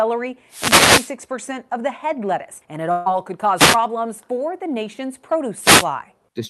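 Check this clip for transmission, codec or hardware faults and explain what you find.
Two kinds of fault turn up in the speech: three wireless microphone noise hits and one burst of packet loss. The audio arrives through a WebRTC call path whose top end stops near 12 kHz, which fits Opus at around 48 kbps.

Wireless microphone noise hits occur from 0.48 to 1.15 s, from 3.56 to 3.77 s and from 5.61 to 5.86 s. The analogue FM radio link between microphone and receiver faded as reflected signals cancelled the direct one, so receiver noise climbed over the audio. Each hit sounds like a brief swish of static laid over the voice. The first is the longest, at about two-thirds of a second.

A burst of packet loss runs from 2.91 to 3.08 s. Roughly 140 ms of audio never reached the player in time, and the receiver filled the gap by stretching the last sound it had and lowering it as the hole went on. 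The result is a held, fading buzz or hiss lasting about 140 ms. The speech then resumes further along, with that stretch of it missing.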